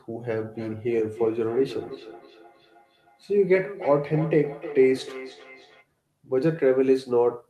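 Speech with a feedback echo between two devices from 0.3 to 5.87 s: the sound returns about every third of a second, at most about 16 dB below the speech. One device plays the other's microphone feed, which that microphone picks up again, and each device's echo canceller removes only its own playback. The fixed, evenly spaced return separates it from room reverberation, which smears into a continuous tail.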